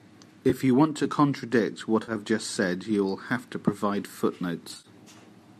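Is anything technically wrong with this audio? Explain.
Yes. AAC frame loss with concealment occurs at 0.50, 2.03 and 4.74 s. With about 20, 50 and 80 ms missing, the decoder rebuilds each gap from the last good spectrum, leaving smeared, noisy patches. The last loss is scattered over 100 ms, with runs up to around 40 ms, in a stream likely carried by low-delay AAC.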